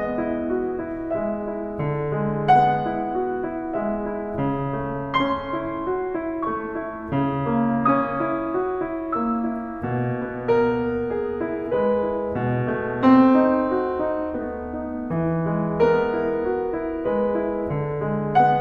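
Nothing in this music stood out as a technical problem on listening.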